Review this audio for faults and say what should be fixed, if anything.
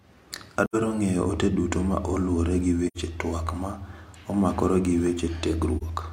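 Three soft-edged dropouts break up the speech, each fading out and back in: 0.65 to 0.76 s, just before "ng'eyo ote duto ma"; 2.87 to 2.97 s, between "duto ma oluwore gi" and "tuak ma"; and 5.78 to 5.83 s. This is AAC frame loss with muting. Missing frames were decoded as silence, and the overlapping windows smoothed the edges. The longer gaps suggest about two lost frames each, roughly 85 ms, and the last one about one frame, roughly 43 ms. To prevent it, protect the AAC stream against packet loss or use concealment that fills missing frames instead of muting them.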